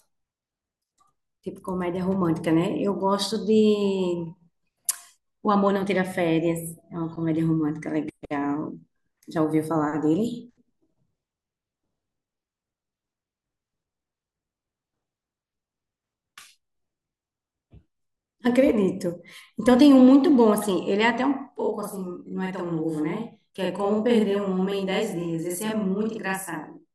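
From 21.56 s to the end, the speech takes on a channel delay (doubling). One channel arrives about 42.7 ms late, which fits a 2048-sample buffer at 48 kHz, and when both are folded to mono the late copy sounds like a second voice or a tight slap echo at equal level. On the waveform, every consonant onset repeats roughly 43 ms later at matching amplitude. A spectrogram shows a dense comb of notches spaced about 23 Hz apart.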